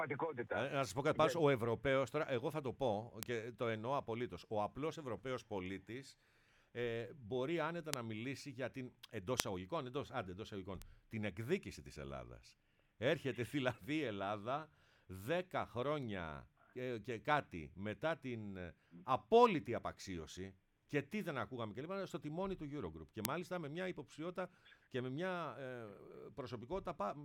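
Five bit error spikes show up as lone sharp ticks at 3.23, 7.94, 9.40, 10.82 and 23.25 s, peaking at about -6 to -30 dBFS. Each is a flipped bit knocking one to three samples briefly off by a power of two, so the clicks are broadband and ignore the underlying sound.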